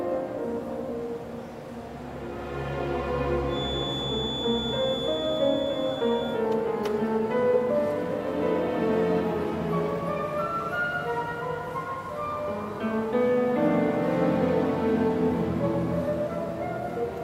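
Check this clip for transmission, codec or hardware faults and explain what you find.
One fault is present: a feedback whistle from 3.45 s to 6.44 s. A thin, steady tone at 3.5 kHz sits behind the sound, roughly 10 dB below it, swelling and fading slowly in level. The likely cause is a loudspeaker-to-microphone loop held just at the edge of feedback, so one frequency rings on without building into a howl. A steady electrical interference tone would hold a rigidly fixed level. This one wavers but never swells into runaway feedback.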